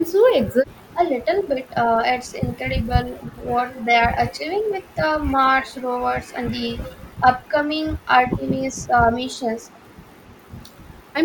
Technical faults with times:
0.93-0.99 speech suppressed in double talk
4.53-4.75 echo leak
7.22-7.26 speech suppressed in double talk
8.86-8.92 speech suppressed in double talk

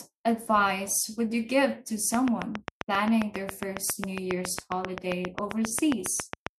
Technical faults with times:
2.14-6.48 train of clicks

